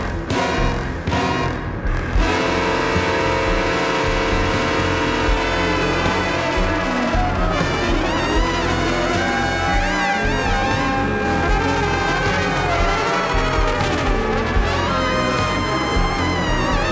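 Throughout the clip the audio runs slow and low: everything plays at about two-thirds speed and sits about 7 semitones flat. This is a wrong sample rate fault. The samples are played back too slowly without conversion, which fits 24 kHz material being played at 16 kHz.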